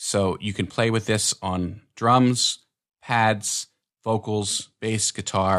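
At 4.59 s the sound loses its top end and picks up a gritty, granular noise that lasts through to the end of the clip at 5.58 s. This is a Bluetooth SBC bit pool drop. Under link pressure the encoder spent far fewer bits per frame, so the highest sub-bands went mostly empty and the remaining bands were coarsely quantised. The degree of dulling points to a bit pool falling from around 31 to 13, roughly 94 kbps.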